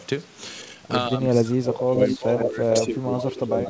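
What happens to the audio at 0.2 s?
At 0.2 s the speech comes through intact, with nothing breaking into it beyond the band limit of the call path, which carries nothing above 8 kHz.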